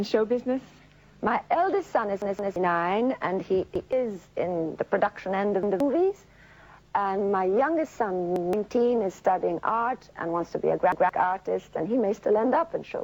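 A repeated buffer occurs at 2.22–2.56 s, where a 0.17 s chunk plays twice more, and again at 3.76, 5.63, 8.36 and 10.92 s, once each. These are hard-edged stutters that fit an 8192-sample buffer replayed while new audio was late, skipping roughly 0.3 s and 0.15 s respectively.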